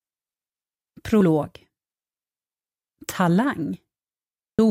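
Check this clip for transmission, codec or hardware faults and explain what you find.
Two short faults stand out, both the same kind of codec problem.

Damaged data in a compressed stream, at 1.21 s and again at 4.58 s. At each point some bytes of the encoded stream are wrong, so the decoder misreads or rejects the affected frame, loses sync and hunts for the next valid frame header. Each event lasts under 20 ms and comes through as a brief blip or chirp that breaks into the sound.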